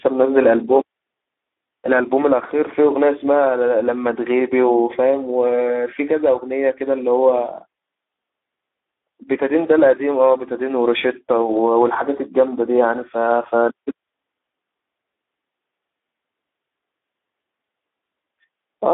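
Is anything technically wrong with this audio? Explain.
Yes. The speech carries plainly audible Speex codec damage from start to finish. Speex is a CELP coder built for older VoIP and game chat. At this quality it has too few bits to model the excitation signal, so the voice comes out noisy and hoarse. The damage level fits a bitrate around 11 kbps. The sound also sits in a narrow line band, roughly 250 Hz to 3.6 kHz.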